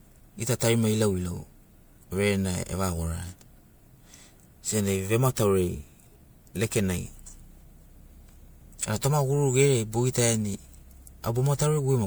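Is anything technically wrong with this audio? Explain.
Yes. Throughout the speech there is generation loss: the sound is swirly, hollow and smeared, with blurred consonant attacks, likely from MP3 coding repeated about four times at around 128 kbit/s, each pass requantising on a shifted frame grid. A spectrogram shows accumulating holes, with nothing above 21 kHz.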